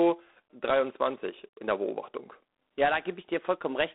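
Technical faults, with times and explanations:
Throughout, G.726 ADPCM coding. The speech carries a harsh, rasping hiss that rises and falls with its level. The damage is plainly audible, and its coarseness fits the 24 kbit/s rate. The coder sends only a few bits per sample, each describing the gap from a predicted value. With so few bits, that gap is measured crudely, and the error becomes noise tied to the signal. The line band runs from about 250 Hz to 3.6 kHz. Nothing is heard above 3.9 kHz.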